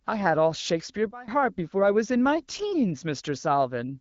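Sudden gain jump at 1.11 s: speech and background drop together by about 20 dB, snapping back at 1.28 s, likely an unramped gain change.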